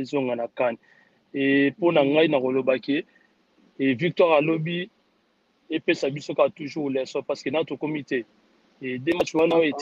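No dropouts, clicks, distortion, level jumps or timing glitches turn up anywhere in the audio.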